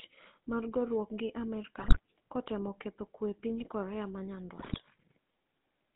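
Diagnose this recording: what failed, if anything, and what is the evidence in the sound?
Codec stage: the GSM full-rate codec runs throughout, giving a steady buzzy, gravelly roughness within about 200 Hz to 3.7 kHz, consistent with 13 kbps coding. It is constant, unlike transient network faults.

Radio link: GSM bit errors at 1.78–1.99 s (after "mar goruok gi", before "kotemo ketho kwe epiny") and 4.60–4.81 s cause squawks and gargling from corrupted filter, pitch and gain values. Unlike silent dropouts, the sound is distorted.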